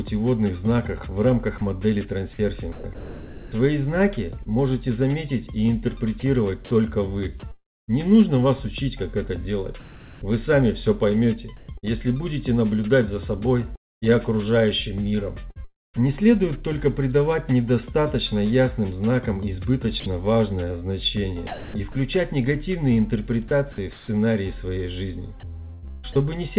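From 1.58 to 4.49 s, 7.52 to 16.03 s and 20.0 to 26.15 s the sound turns choppy, with stretches swapped for a synthetic hiss of about 0.75 s, 1.6 s and 0.78 s in total. This is likely sound chopped by the voice detector, which toggled transmission and filled the gaps with comfort noise, all over narrowband audio with nothing above 4 kHz.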